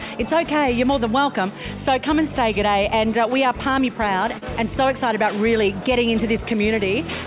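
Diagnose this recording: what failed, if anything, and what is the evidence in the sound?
Network: short concealed packet loss at 4.38–4.43 s. 40 ms arrived too late, so the decoder extended the preceding sound, leaving a brief smear.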